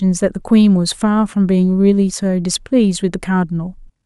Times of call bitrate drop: none

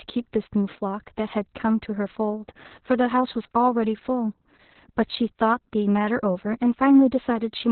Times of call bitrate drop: none

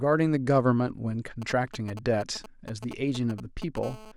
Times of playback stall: none

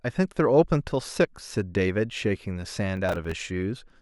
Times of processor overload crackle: 2.97-3.31

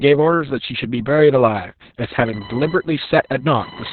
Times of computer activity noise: 2.26-3.92

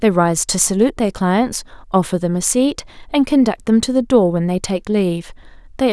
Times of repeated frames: none

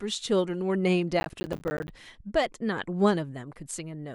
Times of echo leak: none

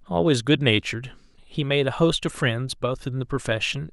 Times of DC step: none

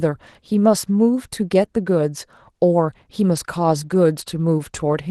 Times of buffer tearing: none

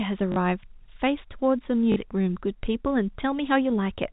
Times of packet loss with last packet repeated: 0.32-0.36, 1.92-1.96

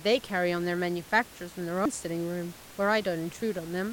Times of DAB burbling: none

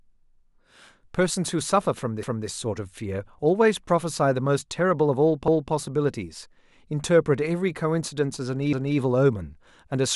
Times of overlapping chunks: 2.23-2.48, 5.48-5.73, 8.73-8.98

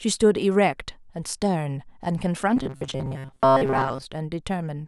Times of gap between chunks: none

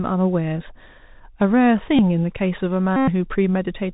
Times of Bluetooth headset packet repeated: 1.97-1.99, 2.96-3.09

